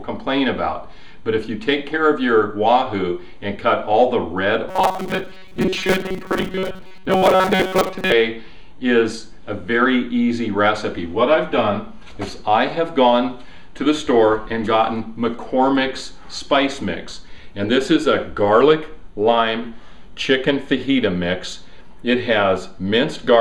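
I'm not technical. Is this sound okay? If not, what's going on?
No. From 4.68 to 8.12 seconds there is robotic sound from repeated short buffers. The audio turns into a stiff, metallic buzz pitched at 188 Hz that only loosely follows the real sound. This is likely because new audio arrived too slowly, so the software kept replaying a tiny slice of about 5 milliseconds to fill the gaps. Most of the real sound in that stretch was skipped, and the constant repetition forces that fixed buzzing pitch.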